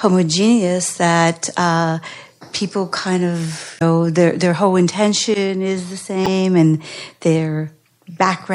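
A speech recording with MP3 compression audible throughout: the treble is cut flat and weak detail flickers, giving a watery, swirly texture on sibilants. On a spectrogram this appears as a hard ceiling with patchy high bands, likely from a low bitrate, consistent with about 64 kbps. Damaged data in the compressed stream causes two short disruptions: from 3.78 to 3.82 s, just after "uh people kind of", and from 6.23 to 6.28 s, right after "whole intention is the". Each time the decoder misreads a frame and resyncs, leaving a brief broadband smear or gap on the spectrogram and a small discontinuity in the waveform.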